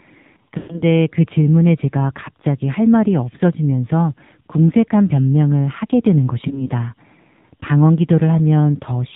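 The whole clip runs through the AMR narrowband mobile codec. Nothing above 4 kHz gets through, and the speech has that buzzy, synthetic phone-line edge, plainly audible, which fits a low mode of around 7.4 kbps, with the vocal-tract model squeezed onto very few pulses.

Then there are lost AMR speech frames, starting at 0.58 s. A run of about 120 ms failed, so until 0.83 s the decoder keeps replaying the last good pitch and tract settings at falling gain. It smears out and fades toward silence, then comes back rough. At 6.48 s a single 20 ms frame drops, and you just get a brief dip or warble through 6.68 s.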